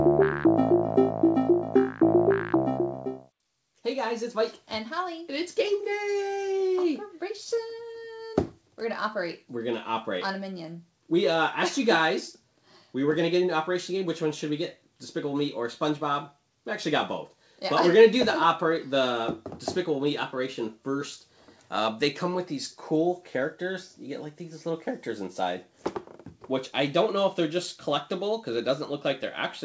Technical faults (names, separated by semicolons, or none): none